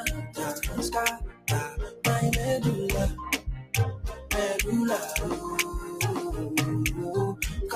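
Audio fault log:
Throughout: noise suppressor applied to music or sounds. The level pumps and flutters, with sustained parts and their tails sinking while sharp onsets pass almost untouched, so the audio sounds thinned and unsteady. A speech-oriented noise suppressor is acting on material it was not built for. It mistakes steady tone, ambience and decay for background noise and pulls them down, so the loss keeps swinging by roughly 10 dB as the content changes.
1.30–1.47 s, 1.70–2.04 s, 3.38–3.73 s, 4.13–4.30 s: sound cut by the noise suppressor. In each of these stretches the audio dips audibly below its surroundings, held or fading parts most of all. The drops reach about 16 dB, about 14 dB, about 16 dB and about 7 dB, each lasting a fraction of a second. The suppressor judged these passages to be noise and attenuated them harder than the rest, cutting their sustain and decay short.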